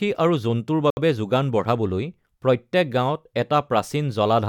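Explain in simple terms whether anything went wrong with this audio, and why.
At 0.90 s the speech drops out completely and comes back at 0.97 s, a gap of about 67 milliseconds. That pattern matches a Bluetooth stall. The likely cause is radio interference that delayed the wireless audio on its way to the headphones. Their small reserve of audio ran out before the missing pieces were sent again, so playback stopped briefly and then resumed once the audio arrived.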